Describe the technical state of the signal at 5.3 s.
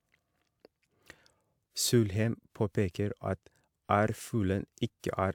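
At 5.3 s the speech signal is intact, with no audible technical fault at that moment.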